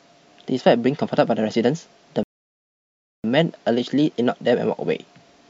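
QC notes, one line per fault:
2.23–3.24 s, rebuffering stall: the speech stops dead into silence for 1.01 s, then resumes exactly where it left off with nothing lost, because the player's buffer ran dry while it waited for data. The waveform shows a flat line, and the spectrogram a blank, hard-edged vertical gap.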